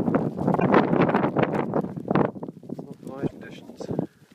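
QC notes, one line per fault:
0.56–0.63 s: damaged data in a compressed stream. A brief glitch of about 70 ms breaks into the sound. Corrupted bytes in the encoded stream leave the decoder unable to read those frames properly, so it outputs garbled samples until it resynchronises on the next valid frame header.
3.25–3.32 s: damaged data in a compressed stream. The same roughly 70 ms glitch recurs, again from corrupted frames throwing the decoder out of sync.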